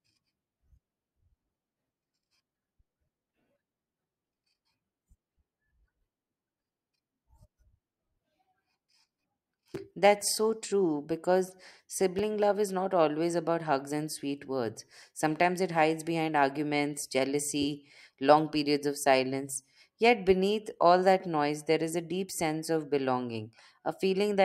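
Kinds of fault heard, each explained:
Chunks out of order: a 5.33 ms chunk plays one chunk late at 9.75 s and 12.19 s, before "love is not always", giving brief jumbled moments; waveform shows three abrupt discontinuities at each, spectrogram thin vertical broadband lines.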